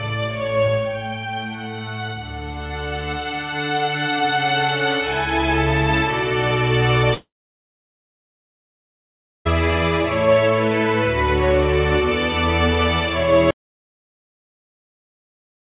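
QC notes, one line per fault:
7.14–9.47 s, long network dropout: about 2.3 s of audio never arrives, likely from lost packets on the call link. The receiver briefly extends the last sound as a fading buzz for roughly a tenth of a second. The remaining 2.2 s or so is near-silence. The sound resumes at 9.47 s with the missing stretch simply gone. The call runs through the G.711 mu-law band, which stops at 4 kHz.
13.51 s to end, audio dropout to silence: the sound cuts off mid-flow and never returns, with the gap running to the end of the file. The gap is silent, with no room tone and no concealment tail. That points to the input itself being lost rather than the network, likely a disconnected source, a failed capture link or a mute, while the recorder kept writing empty samples.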